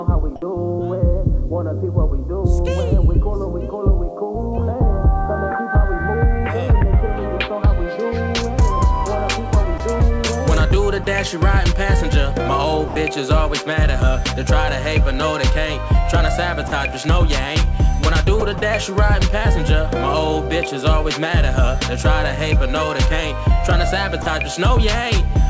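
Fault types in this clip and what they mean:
Sound dropped by the voice detector: at 9.78, 11.04, 12.88, 16.68, 18.40, 18.58 and 24.22 s, 20 to 80 ms of sound gives way to steady comfort noise, likely from the sender's detector misjudging it as background.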